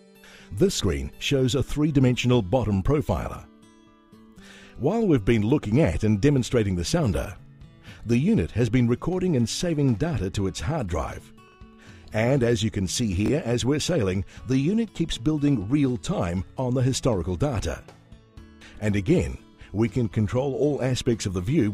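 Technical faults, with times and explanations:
11.48–11.54 s and 13.26–13.30 s, chunks out of order: a 20 ms chunk of audio plays late, after material that should follow it, two chunks late at 11.48 s and one chunk late at 13.26 s. Each swap leaves three hard joins, giving a brief jumbled stutter. Unlike a dropout, no audio goes missing and no silent gap appears, and unlike a repeat, nothing plays twice; the same sound is simply heard in the wrong order.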